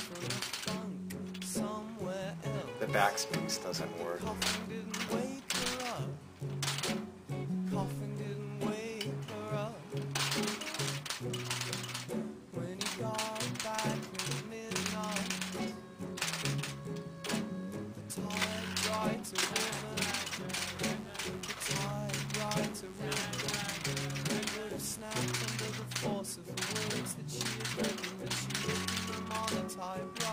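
From 20.54 to 25.36 s there's a mains buzz: switching spikes from the 50 Hz mains leaking in, giving a raspy, harmonic-rich hum sitting roughly 20 dB under the sound.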